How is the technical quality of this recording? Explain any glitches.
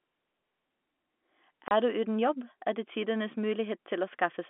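The speech carries one glitch, heard over a telephone-band line with G.711 coding that limits it to roughly 250 Hz to 3.5 kHz. From 1.68 to 1.71 s there is packet loss filled with silence: a 30 ms hole, which fits a single lost packet. The receiver inserted silence instead of concealing the gap, so the speech cuts out abruptly with hard edges at both ends.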